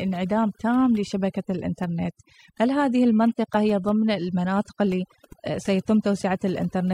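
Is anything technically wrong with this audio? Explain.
Yes. Throughout the speech there is overdone noise removal. A noise reducer set too strong cuts individual frequency bands near its noise estimate, and quiet parts of the voice vanish with them. The background drops away into twinkling, warbling specks.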